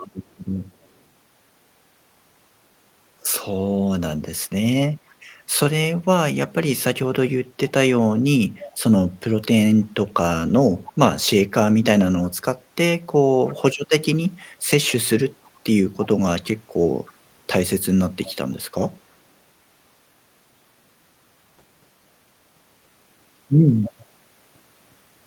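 Echo leak appears at 0.22 to 0.89 s, 5.08 to 5.15 s, 7.69 to 8.78 s, 9.83 to 9.89 s, 10.86 to 10.93 s, 13.46 to 17.17 s, 18.24 to 19.17 s and 23.85 to 23.93 s: a faint copy of the speech returns about 310 ms late, barely audible in places and clearly present in others. The likely cause is a loudspeaker on the far end whose echo canceller let part of its microphone pickup through and back down the line.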